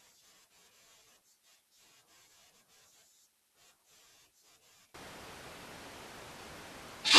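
At 4.94 s the speech suddenly turns roomy and hollow, loses bass, drops about 15 dB, and carries room noise around 30 dB below it until the end. This is likely a switch to a distant microphone after the close one dropped out.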